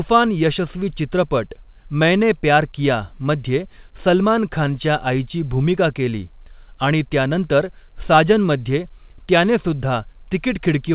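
No technical faults are audible.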